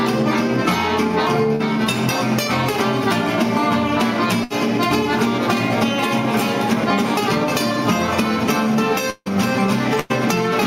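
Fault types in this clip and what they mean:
short concealed packet loss: Around 1.55 to 1.62 s the audio briefly smears, as the preceding sound is stretched over a roughly 40 ms hole. The packets never reached the decoder in time, so the receiver extended the last sound before blending back into the real signal.
burst of packet loss: At 4.44 to 4.52 s and 10.00 to 10.12 s the sound is held and fades as a buzz or hiss, then resumes with about 60 ms and 100 ms missing. Lost or late packets forced the receiver to fill each gap.
long network dropout: At 9.10 to 9.28 s the last sound is drawn out as a fading buzz or hiss, falls to about 50 ms of silence, then returns with roughly 160 ms gone. The likely cause is a stretch where no audio arrived.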